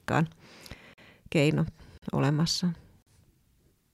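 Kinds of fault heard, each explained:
Gap between chunks: the speech comes through in one-second pieces with about 44 ms of dead silence pushed in at each join, probably from the player starting each chunk a touch late. Nothing actually goes missing, it just stops and restarts. You hear three short holes at 0.94, 1.98 and 3.02 s, evenly spaced, the first landing right before "keino olemassa" and the last right after a later "keino olemassa".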